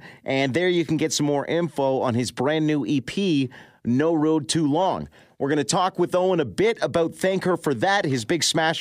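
Nothing in the speech stood out as a technical problem on listening.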